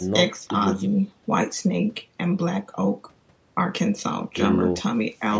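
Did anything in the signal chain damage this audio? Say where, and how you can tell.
No, nothing stood out on listening; the speech bears the expected marks of call microphone processing, with the lowest bass trimmed and nothing above 8 kHz, but I heard no damage from any stage of the chain.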